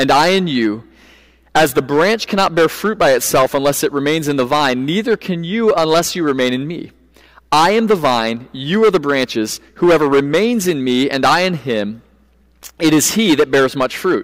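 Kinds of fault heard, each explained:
Hard clipping: the speech was pushed about 17 dB past what a stage could pass, flattening roughly 7% of samples into a harsh fuzz throughout.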